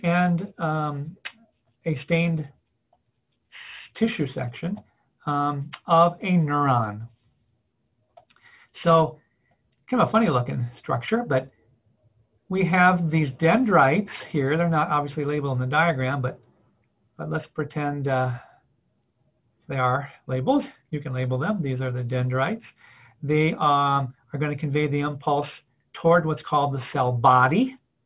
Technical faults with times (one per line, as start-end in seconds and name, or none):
0.00-28.06 aliasing